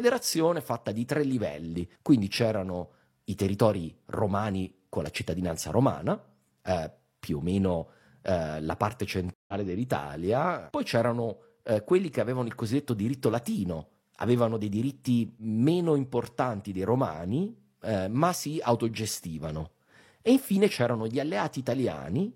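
In this speech clip, a stream reconnect occurs from 9.34 to 9.54 s, just after "eh la parte": the connection dropped and the player restarted its decoder mid-stream, leaving a 144 ms silence before the speech resumes about 150 ms further on, so that stretch is skipped.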